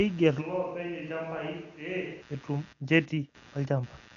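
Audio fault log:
throughout – computer activity noise: A buzzy, chirping pulse train repeats about a hundred times per second beneath the speech, sitting roughly 30 dB below it. Load swings in the processor, graphics card or mouse disturb the ground that the audio circuit shares, and that disturbance leaks into the signal. Unlike steady mains hum, this buzz has a gritty, pulsed texture that follows the computer's activity rather than the sound being recorded.
0.43–2.20 s – switch to a distant microphone: The speech abruptly turns roomy and hollow, thinner in the bass and roughly 10 dB quieter, with room noise rising to around 25 dB below the speech. It then snaps back just as suddenly. This is likely a change to a microphone farther away while the close one dropped out. A simple gain dip would keep the same tone, but here the room's reflections and the lost low end change the character of the sound.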